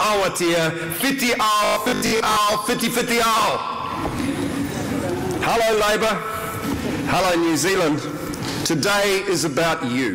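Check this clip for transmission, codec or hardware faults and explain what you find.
One fault, a robotic sound from repeated short buffers, runs from 1.64 to 2.36 s. New audio likely stopped arriving in time, so playback kept looping the last fragment, which fits a 20 ms buffer, while the real audio was skipped. Most of that stretch is repetition, and the looping locks a fixed 50 Hz pitch onto the sound, turning it into a rigid, metallic buzz that only loosely follows the original.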